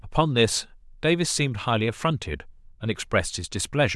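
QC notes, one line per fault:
No faults heard anywhere in the speech.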